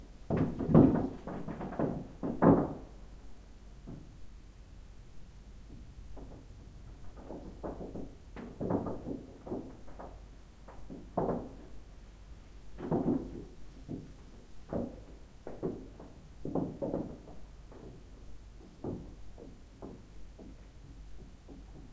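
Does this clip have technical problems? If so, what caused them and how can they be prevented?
No, nothing here needs fixing; the audio carries the ordinary band limit of a wideband call path, with no content above 8 kHz, which points to a G.722-class codec at around 64 kbps.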